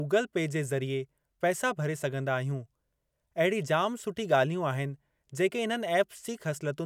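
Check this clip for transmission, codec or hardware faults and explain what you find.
Nothing here needs flagging; I listened through the speech and didn't hear anything amiss.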